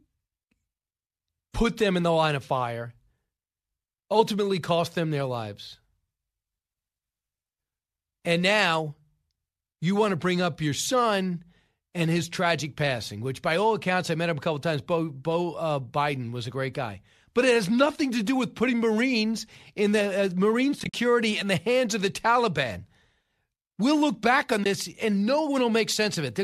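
Around 20.80 to 20.94 s the speech drops out in a cluster of short, soft-edged gaps, about 90 ms of missing sound spread over 140 ms, the longest around 50 ms. At 24.64 s a single 20 ms hole follows. This is AAC frame loss with muting: the decoder zeroed the missing frames, and the overlapping windows faded the sound out and back in. The gap sizes fit 10 ms frames from the low-delay AAC coding.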